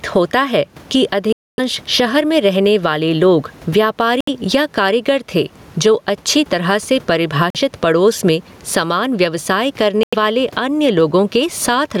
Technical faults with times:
0.00-12.00 gain pumping
1.33-1.60 Bluetooth dropout
4.20-4.29 Bluetooth dropout
7.50-7.57 Bluetooth dropout
10.03-10.15 Bluetooth dropout

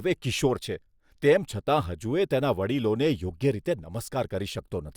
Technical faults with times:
none

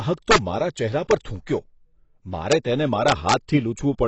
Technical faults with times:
0.00-4.08 AAC compression

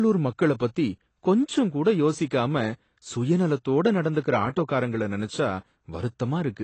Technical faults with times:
0.00-6.63 AAC compression

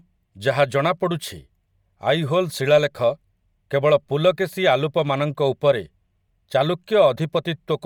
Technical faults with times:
0.00-7.86 Bluetooth LC3 compression

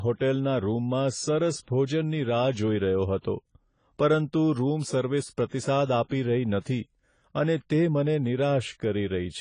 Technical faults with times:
0.00-9.40 AAC compression

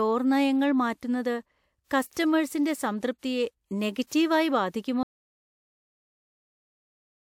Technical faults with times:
5.03-7.24 audio dropout to silence

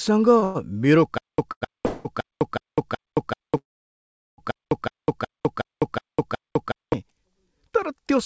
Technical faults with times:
1.18-6.93 stutter with silent gaps

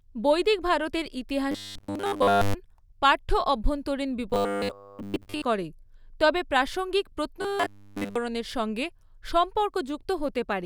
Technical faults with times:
1.51-2.54 robotic sound from repeated short buffers
4.30-5.44 robotic sound from repeated short buffers
7.42-8.16 robotic sound from repeated short buffers

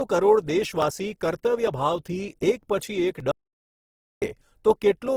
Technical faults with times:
0.00-5.17 Opus compression
3.31-4.22 audio dropout to silence

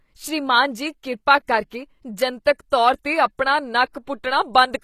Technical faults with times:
0.00-4.83 HE-AAC compression
1.46-1.48 pre-echo
2.70 pre-echo

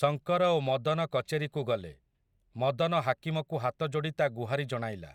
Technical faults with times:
none

